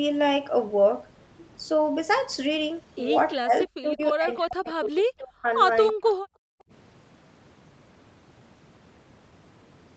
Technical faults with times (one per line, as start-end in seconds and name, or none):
3.32-5.50 speech suppressed in double talk
5.92-6.02 speech suppressed in double talk
6.02-6.14 echo leak
6.30-6.71 background gated by the echo canceller